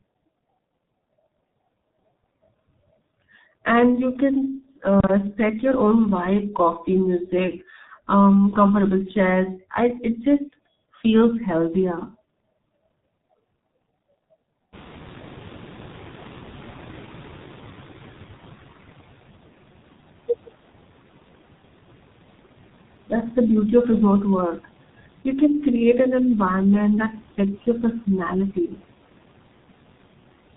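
From start to finish the speech passes through the G.723.1 codec. Its 30 ms frames and low rate (the sound fits roughly 6 kbit/s) cut everything above 4 kHz and track the voice slowly, so it sounds heavily muffled and hoarse, with smeared consonants. That steady roughness tells it apart from brief dropouts.

Just before 15 s the room noise jumps by about 25 dB. From 14.72 to 18.65 s the noise suppressor is catching up: the noise first comes through with little reduction, then sinks by about 9 dB over nearly 4 seconds. The gradual fade, rather than an abrupt gate, marks a lagging noise estimate.

From 28.55 to 28.80 s the suppressor cuts speech, dropping it by up to about 10 dB for around a tenth of a second. A soft part of the voice sounds swallowed. The speech dips along with the background instead of the audio cutting out entirely, which points to suppression rather than packet loss.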